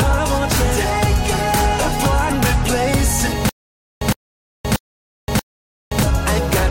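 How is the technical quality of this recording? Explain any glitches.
The recording has two glitches, one tiny and one much longer.

At about 2.29 s there's a quick blip from damaged data in the compressed stream. Some bytes in that stretch were wrong, so the decoder couldn't read the frame properly, lost its place, and had to hunt for the next valid frame header before playing cleanly again. The result is a short glitch, over in roughly 13 ms.

From 3.49 s to 6.03 s you get a stutter with silent gaps. A burst of about 112 ms plays, then roughly 521 ms of dead digital silence, and the same burst comes back every 634 ms, four times in all, like a skipping record with pauses. The likely cause is the player or stream stalling, replaying its last buffered chunk at each retry and then running dry. Whatever should have played across that stretch is simply gone.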